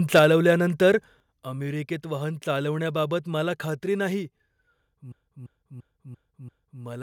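It's a speech clip with some microphone overload right at the start, 0.15 to 0.5 s: peaks run about 7 dB past the converter's ceiling and a few percent of samples get flattened, giving a harsh crackle, likely from the input gain being set too hot. Then the microphone volume steps down in sudden drops at 0.19 s (about 4 dB), 1.2 s (about 6 dB, just before "अमेरिकेत वाहन चालवण्याबाबत") and 3.66 s (about 2 dB), likely as the call software pulls the device gain down. There is a system hang loop from 5.12 to 6.83 s, just before "मला खात्री". The machine stalled while the sound hardware kept replaying its ring buffer, so one 341 ms chunk repeats five times like a skipping record at about 2.9 Hz, which fits a 16384-sample buffer.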